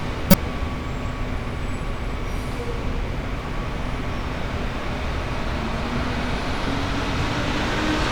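A short, loud chirp, squeak, blip or burst of noise from 0.30 to 0.34 s, peaking near -5 dBFS: a corrupt frame decoded. Flipped bits in a single compressed frame put energy at wrong frequencies.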